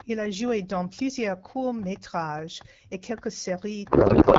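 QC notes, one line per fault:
3.89–4.38 s, codec payload misread: right after "courts métrages et quelques" the speech collapses into garbled noise and warble that barely tracks it, to the end. Octet-aligned AMR is being decoded as bandwidth-efficient, so every field lands in the wrong bits.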